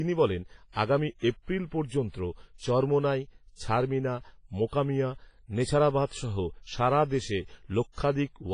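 A speech clip with heavy transform-codec damage throughout. The sound is ringing and washy, with hiss that swells and fades with the voice. Nothing is present above 10.5 kHz. This is likely WMA compression, at a low bitrate that fits roughly 24 kbps. There is also pre-echo from 7.92 to 7.98 s, just after "সারা দেশে". A hiss of about 56 ms runs ahead of a sharp attack, which sounds softened. The codec spread noise meant for the loud onset across the quiet moment before it.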